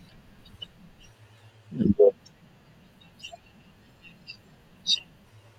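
No technical faults can be heard anywhere in this speech recording.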